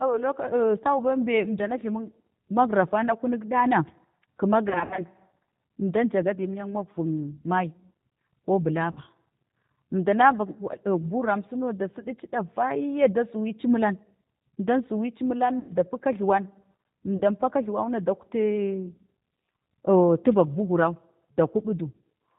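Throughout, the speech carries plainly audible G.729 codec damage: nothing above 4 kHz, and a rough, slightly synthetic texture from rebuilding each frame out of a few pulses through a vocal tract filter. That synthetic grain, not just dullness, separates it from a plain low-pass.

VoIP packet loss concealed by the speech codec follows at 4.69–5.02 s (about 140 ms lost in short runs over 280 ms), 8.91–9.01 s, 15.59–15.73 s, 17.17–17.22 s and 21.31–21.37 s. Unlike silent dropouts, each gap becomes a fading extension of the preceding sound, buzzy or noisy, slow to recover.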